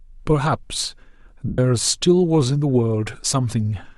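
At about 1.48 s the speech drops into a short stretch of lost LE Audio frames, running to about 1.59 s, so roughly 105 ms is gone, which fits a run of around fourteen 7.5 ms LC3 frames. With nothing arriving, the decoder keeps replaying the last good spectrum with scrambled signs, so the voice turns into a brief noisy, hissy smear that fades as the gap goes on. The light codec coloration around it is just ordinary lossy compression.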